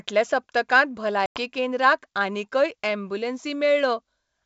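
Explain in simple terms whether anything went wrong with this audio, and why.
Packet loss on an ADPCM call leaves a silent gap of about a tenth of a second at 1.26–1.40 s. The decoder loses track, so "केंद्राक आनीकय" resumes slightly distorted.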